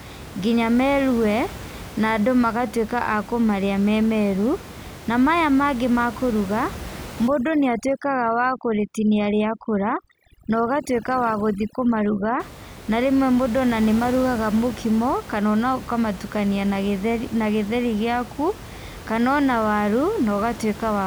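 From 7.28 to 12.40 s the speech shows overdone noise removal: a noise reducer set far too aggressively cuts individual frequency bands whenever they sit near its noise estimate, taking the quieter parts of the voice with them. The room noise, about 16 dB below the speech elsewhere, drops and breaks up into twinkling specks. Unlike a noise gate, the background doesn't switch off as a whole.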